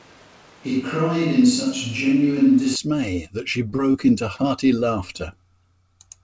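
From the start to 2.76 s, just before "that she", the sound is roomy and hollow with thin bass but no real drop in level, and room noise sits roughly 30 dB below it, likely from a switch to a distant microphone. A spectrogram shows a raised noise floor and smeared, reverberant energy that stops abruptly at the cut.

Short concealed packet loss follows at 3.70, 3.76, 3.92 and 4.36 s, after "that she". Each patch lasts about 20 ms and was filled by extending the preceding sound, which comes out as a brief smear or wobble. On the waveform each gap looks like a short, oddly uniform stretch, and the spectrogram shows a blurred sliver below the 8 kHz ceiling.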